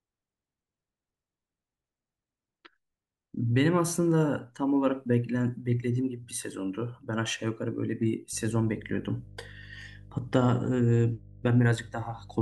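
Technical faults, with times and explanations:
8.33 to 12.42 s: mains hum, a steady 50 Hz tone about 20 dB below the speech, from power-line coupling such as a ground loop or nearby transformer.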